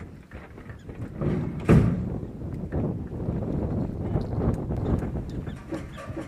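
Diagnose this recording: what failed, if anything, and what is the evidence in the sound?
At 4.77 s a clean duplicate abruptly joins the sound and runs to the end, trailing about half a second behind at roughly equal level, with no decay or room colour. This doubled audio track likely comes from a second, slower capture path or a misaligned edit.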